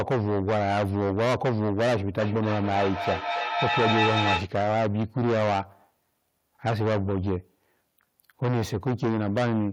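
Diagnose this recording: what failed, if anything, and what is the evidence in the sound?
Hard clipping runs through the whole speech recording, most likely at the converter or an overdriven gain stage feeding it. With about 18 dB of overdrive, roughly a fifth of samples hit the ceiling, so every loud syllable turns to harsh fuzz. The waveform shows flat-topped peaks; the spectrogram shows harmonics smeared upward.

A feedback echo between two devices, a call-processing failure, appears from 2.2 to 4.55 s. Speech returns at a fixed interval of about 300 ms, with repeats reaching about 1 dB below the direct speech, so they stack rather than decay. The spectrogram shows evenly spaced, progressively thinner copies.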